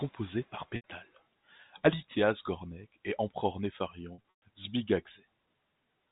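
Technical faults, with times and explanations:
0.76–0.84 s and 4.14–4.42 s, packet loss with pitch repetition: packets dropped, and the receiver bridged each gap by repeating the last pitch period while fading it over about 50 ms. The first gap (80 ms, which fits four lost packets) gives a briefly held, buzzy tone that decays before the sound resumes. The second is scattered, 180 ms lost across 280 ms with a longest run of 120 ms, so the repetition fades into silence and the sound returns through short cross-fades.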